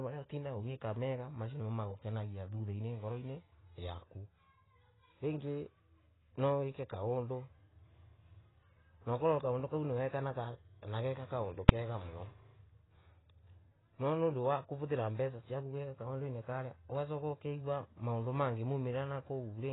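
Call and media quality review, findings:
Dull, smeared speech throughout, fizzy warble on sibilants, nothing above 3.9 kHz. Likely AAC compression (AAC-LC), heavy damage fitting about 16 kbps; low cut-off, coarse quantisation.

Single loud bang at 11.69 s. Invalid numbers at full scale: an infinite or invalid calculation pinned output to one extreme value for 2.67 ms, fitting a 128-sample block.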